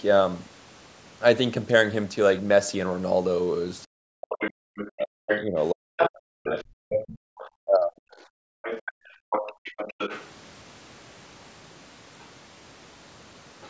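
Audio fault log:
3.95–7.92 s, speech suppressed in double talk: For about 3 s across this span the talker's speech sinks and breaks up, dipping at its deepest by roughly 40 dB, so parts of it fade or drop out in pieces. The likely cause is an echo canceller that, with both ends talking at once, could not tell the near voice from the loudspeaker echo and pulled the whole microphone signal down.
4.29–10.28 s, 12.2 s and 13.62–13.69 s, other side's voice leaking through: A second, far-end voice runs under the talker for about six seconds, only a few dB below the main speech. Two later scraps at 12.2 s and 13.62 s are far fainter, around 30 to 35 dB down. This is likely loudspeaker playback reaching the microphone and surviving incomplete echo cancellation.
4.59–4.68 s and 8.2–9.64 s, background gated by the echo canceller: The room tone collapses by about 40 dB, first in a brief 90 ms hole and then in drop-outs totalling roughly 0.7 s within the later span. 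The canceller clamps the microphone hard while the loudspeaker plays and releases it afterwards. Because of this, the ambience drops out and returns rather than holding steady.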